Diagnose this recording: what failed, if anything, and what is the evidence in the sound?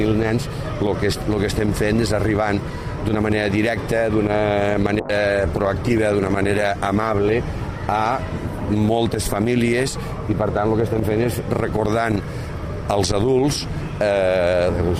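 Call bitrate drop at the codec stage, 5.01 to 9.47 s: the sound turns coarse and muffled, consistent with the encoder falling from around 128 kbps to 21 kbps.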